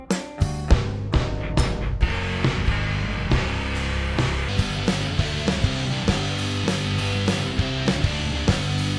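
Wrong sample rate runs from 0.71 s to 4.49 s. Across that span the music is played back slower than it was captured, with no rate conversion, so speed and pitch fall together: everything runs at 0.689 times normal speed and sits about 6.45 semitones lower, dragging and darkened. That ratio fits material recorded at 32 kHz being played out at 22 kHz. At 4.49 s the music snaps back to its proper tempo and pitch.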